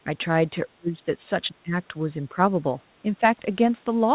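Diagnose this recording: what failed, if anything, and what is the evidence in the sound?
The speech ducks and breaks up at 0.50–1.26 s, 1.48–1.94 s, 2.22–2.38 s and 3.02–3.23 s, dropping about 40 dB at first, then about 20, 10 and 5 dB. This is likely speech suppressed in double talk: the echo canceller confused the talker with far-end echo and attenuated both.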